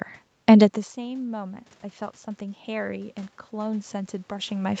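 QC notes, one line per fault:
0.54–1.61 s and 2.38–4.8 s, automatic gain rising: both times the level reaching the microphone fell by about 21 dB, the first around when the talker moved back near 0.5 s, and the automatic gain control responded by slowly raising its gain instead of jumping. In the first stretch it climbs by about 3 dB over roughly a second. The speech and the room noise swell up together, a gradual lift rather than a step, continuing to the end of the clip in the second stretch.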